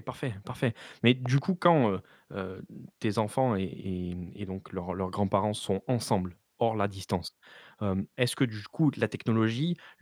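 Between 1.26 and 1.40 s a loud pop cuts across the speech: two sharp pops in quick succession, peaking about 10 dB above the speech, while the talking carries on underneath without a break. The likely cause is a sudden voltage step or pulse entering the signal path, such as a plug being seated, a switch, a static discharge or a driver glitch. The circuitry after it then shapes each pulse into a thump.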